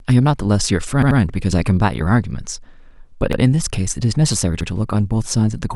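At 1.02 s, 3.33 s and 4.61 s the speech stutters from a repeated buffer. New audio arrived late, so the last 85 ms piece replayed. It plays three times at 1.02 s and twice at the others, with hard joins. The length fits a 4096-sample buffer.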